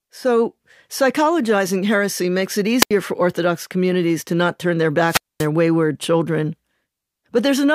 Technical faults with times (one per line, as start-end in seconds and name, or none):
2.80-2.91 wireless microphone squelch dropout
5.07-5.47 wireless microphone squelch dropout